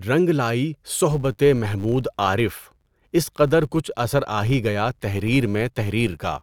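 Speech, with a filter restarted on every block from 1.11 s, just after "رنگ لائی", to the end. A 100 Hz buzz rides on the sound. The filter starts each block from silence, which fits blocks about 10 ms long. The buzz follows the speech level.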